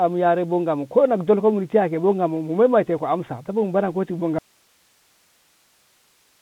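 From the start, the speech has passed through a Bluetooth CVSD headset codec, the narrowband link that codes each sample as a single up-or-down bit and adapts its step size as it goes. Everything above 4 kHz is gone, which fits a 64 kbps CVSD connection. Where the voice rises quickly in level or pitch the step cannot keep pace and the sound distorts, s sounds come through scratchy, and a grainy hiss sits beneath the whole clip.

At 4.39 s, just after "mu bare kanti bo", there is an audio dropout to a faint residue that lasts to the end. The likely cause is that the incoming signal was lost while the path downstream stayed open. The speech stops abruptly rather than pausing or fading, and what remains is only a low hiss, roughly 40 dB below the earlier speech level.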